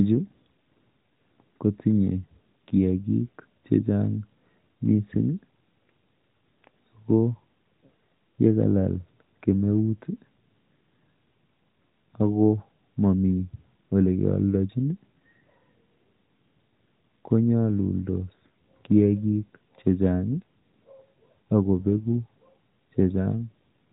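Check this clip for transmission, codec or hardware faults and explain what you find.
Nothing is wrong with the signal: the speech comes through the AMR narrowband mobile codec, with nothing above 4 kHz and only the light coding colour that fits its 12.2 kbps mode.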